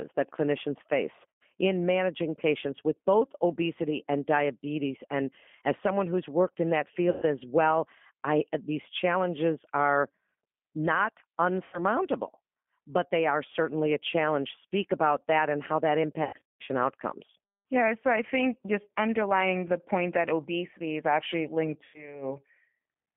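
The whole clip runs through the G.729 codec, squeezed into a 200 to 3400 Hz phone band at 8 kbit/s, so the speech sounds plainly rough and synthetic. VoIP packet loss concealed by the speech codec hits at 1.29 s after "that clinicians face", 7.10 s after "who's worked in that", 11.64 s, 16.24 to 16.63 s (scattered, longest gap 150 ms), and 21.85 s after "obesity is actually linked". Each time the decoder stretches the last sound into a fading buzzy tone or coloured noise.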